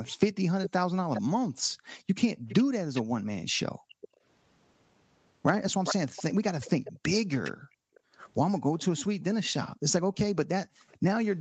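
From 0.62 to 4.17 s a delayed copy of the speech trails it by about 410 ms, roughly 10 dB down. This is likely an echo leak, where a far-end loudspeaker's sound slipped past that side's echo canceller. Between 1.49 and 4.22 s the room background sinks by up to about 40 dB, around 1.5 s in total. That is background gated by the echo canceller, which clamped the microphone while the loudspeaker played. From 5.84 to 8.0 s the 410 ms echo returns much louder, only about 5 dB below the speech, likely the same echo leak. The background gating recurs from 6.92 to 8.18 s for roughly 0.7 s and again briefly from 10.66 to 10.89 s. A last echo sits at about 30 dB down from 10.89 to 10.97 s, 430 ms behind, likely a small residual leak.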